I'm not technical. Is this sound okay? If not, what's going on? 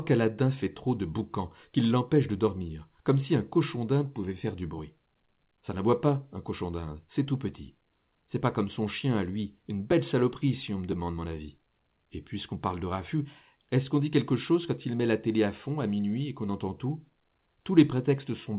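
No, there's one hiccup: a quick jump at about 9.92 s, where the speech skips ahead a tiny slice, most likely a dropped buffer (overrun), with the recording falling behind and losing a few milliseconds. The dull, phone-call sound comes from the call codec cutting everything above 4 kHz.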